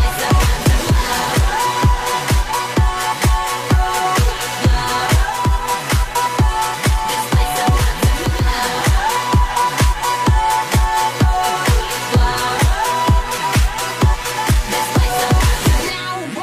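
From 5.22 to 8.51 s there's digital radio blending to analogue: the receiver loses the digital stream and cross-fades over about 305 ms to the station's FM signal, bringing in hiss roughly 35 dB down and a level drop of about 1 dB, before blending back.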